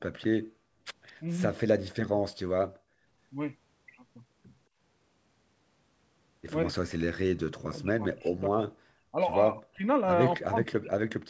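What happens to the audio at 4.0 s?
At 4.0 s the speech plays through intact, with no dropout, glitch or distortion, only the steady 8 kHz band limit of the G.722 call path that runs through the whole clip.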